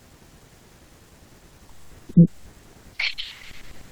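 No technical faults occur at any point in this speech recording, so there is nothing to set out in time order.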